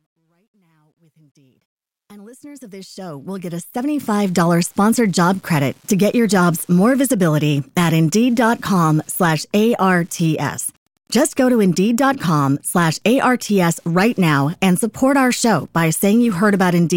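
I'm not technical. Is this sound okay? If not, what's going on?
No. A faint, steady ticking about ten times a second runs through the whole clip. That's Wi-Fi interference: a nearby Wi-Fi radio's beacon, every 102.4 ms, leaks into the audio circuit.

The opening fade-in from 0 to 4.4 s sounds gritty, worst during the first 1.6 seconds. That's truncation distortion on a fade: the volume stage kept too few bits, about 12, so the quietest part turns into coarse steps.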